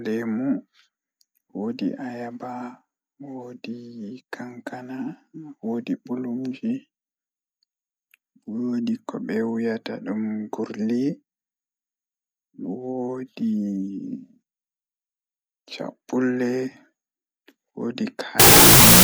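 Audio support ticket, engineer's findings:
Harsh, loud broadband noise from 18.40 s to the end at 19.04 s, speech buried underneath, at half speed and an octave low. Wrong sample width at the decode or read stage: each 4-byte sample split into two 16-bit values, doubling the sample count. Consistent with 32-bit float data read as 16-bit integers. Mismatched bytes produce the noise, and only the high-order halves keep a trace of the real signal.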